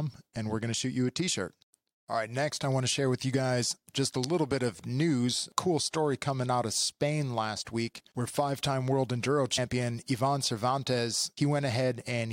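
At 9.57 s, right after "five time world enduro", the speech jumps forward because compressed frames were skipped. About three frames of roughly 23 ms each never reached the output, so about 70 ms of sound is missing. The overlapping frames on either side blend at the join, which leaves a short smeared blip rather than a sharp click. Unlike a dropout, no silent gap is inserted: the speech simply continues slightly further ahead.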